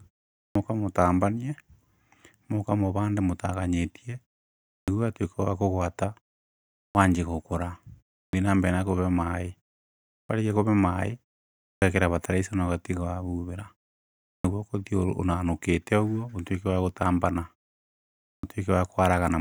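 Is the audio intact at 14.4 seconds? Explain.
No. At 14.4 seconds there is a clipped start after a pause, from 14.37 to 14.44 s. After a 0.69 s silence, the output device had dropped into an idle state. It needed about 74 ms to wake. That opening is lost, so the speech starts abruptly.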